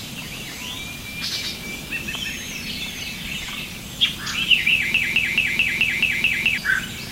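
An everyday-sound recording with a broken-record loop from 4.94 s to 6.58 s: a 0.22 s fragment repeats exactly, back to back, eight times, and the audio that belonged in that span is lost. The likely cause is a stalled player or stream resending its last buffered fragment.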